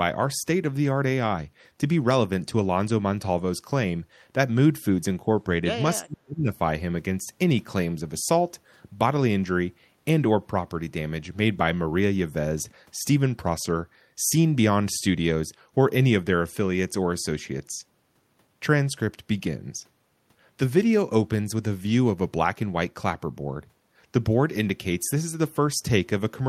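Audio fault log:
6.03–6.49 s, speech suppressed in double talk: speech plunges around 35 dB, likely the echo canceller ducking everything while both ends talked at once.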